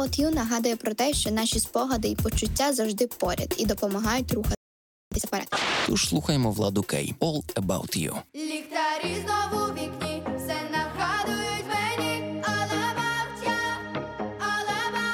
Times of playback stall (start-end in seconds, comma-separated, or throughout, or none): 4.55-5.12